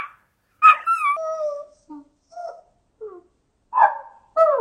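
From 1.17 s to the end, a section at the wrong speed plays at 0.55 times its recorded rate. The sound drops by roughly ten semitones and drags out to nearly twice its length. This is likely a playback or edit step running on a mismatched clock. Pitch and timing fall together at the same moment, with no smearing or warble, which separates it from a pitch-shift or time-stretch effect, where one changes without the other.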